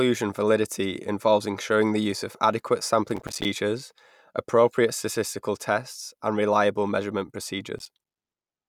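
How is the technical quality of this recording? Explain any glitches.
The recording is marred by two bursts of processor overload crackle, at 3.09 to 3.45 s after "the use of adequate" and at 7.79 to 8.21 s after "tests and reliable measurement". The processor fell behind on its small buffers, around five milliseconds each, missing roughly twenty and then fifteen deadlines. Each miss left a hard-edged silent gap, so the speech tears into gritty crackle until the load eases.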